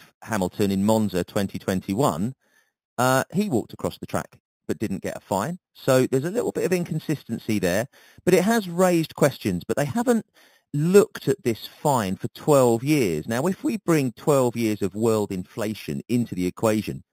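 Throughout, imaging from sample-and-hold upsampling of 8 kHz audio adds a metallic fizz at 4 to 8 kHz, about 18 dB down, tracking the speech level and moving opposite to pitch, unlike steady hiss.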